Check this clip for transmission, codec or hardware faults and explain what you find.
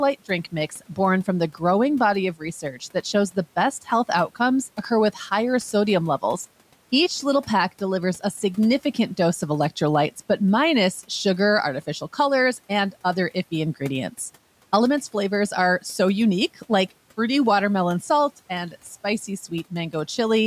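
The noise suppressor mistook parts of the speech for noise twice, from 0.7 to 0.98 s, just before "from the growing body", and from 2.61 to 3.05 s, between "the growing body of" and "shows the best health". Its gain reduction pulled about a tenth of a second of speech down each time, by about 11 dB and about 8 dB, together with the room noise sitting about 28 dB below the speech, so those sounds come across faint and swallowed.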